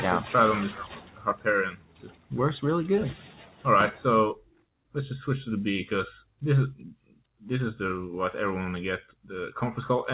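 From the start, a noise suppressor built for speech is applied to these sounds. It treats sustained tones and decaying tails as noise, so the level pumps and flutters over a swing of around 10 dB while sharp attacks pass largely intact. Unlike a gate, it never fully closes.

The sound is cut by the noise suppressor at 0.86 to 1.46 s, 1.71 to 2.31 s, 3.15 to 3.65 s, 4.36 to 4.65 s and 6.94 to 7.42 s. Held or fading material sinks by about 12 dB, or about 10 dB at 3.15 s, and tails end early. These are deeper, localized dips rather than the general pumping.

The band stops at 4 kHz, which points to a G.711 mu-law call path at 64 kbps.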